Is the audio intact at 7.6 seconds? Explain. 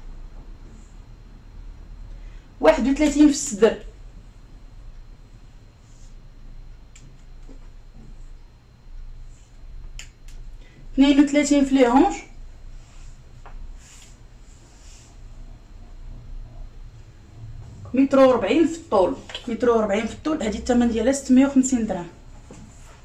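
Yes, the audio is intact at 7.6 seconds, with no dropout, click, distortion or other fault at that moment.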